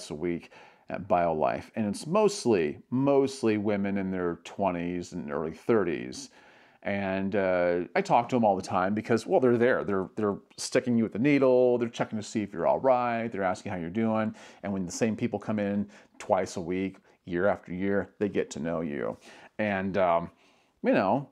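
No technical faults are audible.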